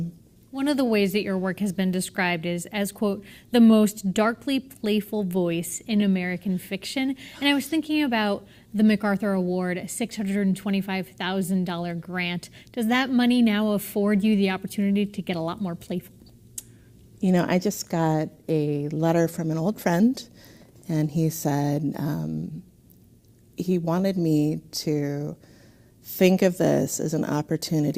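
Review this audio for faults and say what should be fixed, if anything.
Clock drift between sender and receiver: the sender's clock runs about 2% slow, so the jitter buffer steadily drains and the receiver must keep padding the stream. The result is a faint, recurring unevenness in timing heard throughout the audio. Locking both ends to a shared clock reference, or running adaptive resampling at the receiver, would stop this drift building up.

Repeated timing corrections: from 0.30 s to 28.0 s the receiver keeps repeating short pieces to compensate, playing at 98% speed and adding roughly half a second overall. These insertions are small and unevenly spaced. Replacing discrete repeats with smooth, continuous rate adjustment would hide these corrections.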